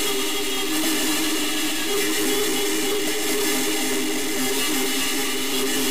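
From start to finish, a harsh, buzzy distortion rides on every sound. Quiet gaps fill with steady noise instead of falling silent. The likely cause is a stuck bit, one data bit held fixed, shifting values by a step of about -20 dBFS.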